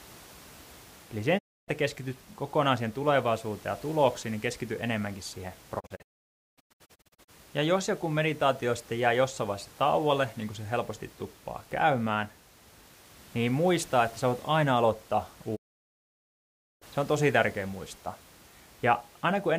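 Speech with three digital broadcast dropouts, where the receiver stopped getting good frames and muted: 1.37–1.70 s, scattered holes across 5.79–7.30 s (longest 0.54 s), and 15.55–16.84 s. Each shows as silent gaps with 20 ms fades, blank vertical bands on a spectrogram.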